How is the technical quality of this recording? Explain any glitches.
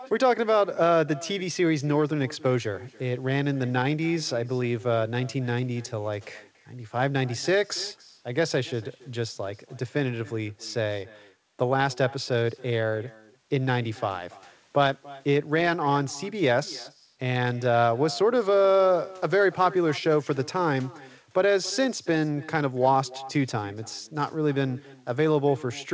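The recording is compromised by an echo with no canceller running through the whole speech clip. The far end's loudspeaker leaks into its microphone and nothing removes it, so each phrase returns about 21 dB quieter, roughly a third of a second later, as a thin shadow. The call path's bandwidth tops out at 8 kHz, which fits G.722.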